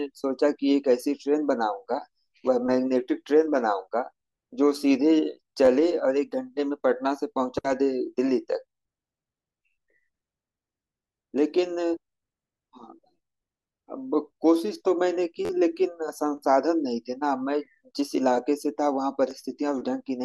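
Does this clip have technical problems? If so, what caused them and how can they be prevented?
Yes. In this speech there are brief stuttering buzzes at 5.65 to 5.68 s, 15.45 to 15.50 s and 19.31 s, where a tiny slice of sound repeats with a hard join each time. The slice plays two extra times, then four, then once. That is a repeated buffer. Fresh audio was late, so the device replayed its last block, whose length of about 11.6 ms fits a 512-sample buffer. Essentially nothing is lost; the sound is held up. To prevent it, use a larger buffer or reduce competing CPU load so audio arrives before each block is due.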